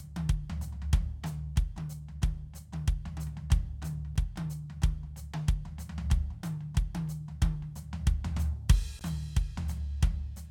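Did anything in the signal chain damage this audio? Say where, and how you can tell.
Yes. The music has two blocks of digital silence, at about 4.16 s and 8.99 s. The first hole lasts 5.8 ms, which fits a 256-sample buffer. The second lasts about 16 ms. Both cut hard to silence and back with no fade. The short one sounds like a tick. The longer one is a brief dropout. This points to the driver or buffer stage. The output buffer was not filled in time and went out empty.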